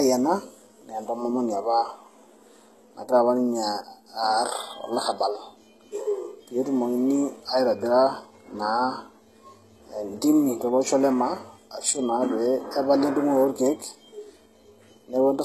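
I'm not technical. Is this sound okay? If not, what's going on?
No. The speech has plainly audible damage from start to finish. It sounds like HE-AAC compression, the likely cause. This kind of compression keeps only the lower sounds. It then fakes the higher ones by copying the lower sounds upward. The fake treble does not match the real voice. S sounds come out gritty, metallic or lispy. Nothing at all is left above 12.3 kHz, so the airy top of the voice is missing.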